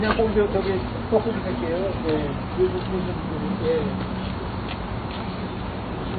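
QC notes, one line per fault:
Throughout: MP3 compression, likely from a very low bitrate, something around 24 kbps judging by the damage. Nothing comes through above about 4.6 kHz, so the top end is simply gone and the sound comes across dull and boxed-in. The artefacts are plainly audible: weak frequency components keep switching on and off from frame to frame as the encoder runs out of bits, which gives that watery, swirly texture, and sharp attacks come out smeared rather than crisp.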